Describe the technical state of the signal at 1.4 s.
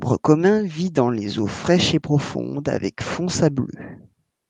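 At 1.4 s the speech is intact, with no dropout, glitch or distortion, only the ordinary coding texture of the Opus call path and its top end ending around 12 kHz.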